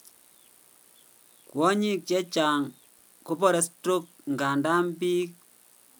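No technical faults can be heard anywhere in this speech recording.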